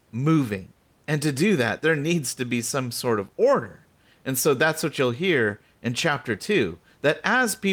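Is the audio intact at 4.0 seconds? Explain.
Yes, the audio is intact at 4.0 seconds; the only thing under the speech there is faint room noise, about 41 dB below it, which belongs to the recording space rather than to any fault.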